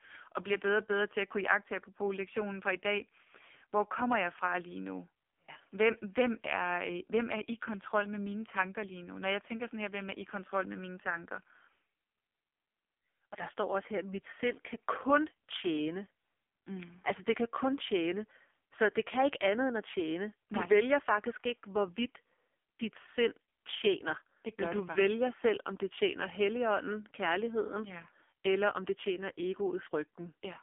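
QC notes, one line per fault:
Throughout: AMR narrowband mobile codec. The speech is held to a 250 Hz to 3.5 kHz line band, with nothing above 3.6 kHz. Heavy codec damage makes it buzzy and synthetic, which fits a low AMR-NB mode around 5.9 kbps rebuilding speech from a coarse vocal tract model.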